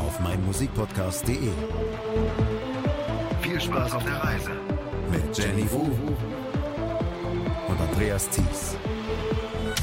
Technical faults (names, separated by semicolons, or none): none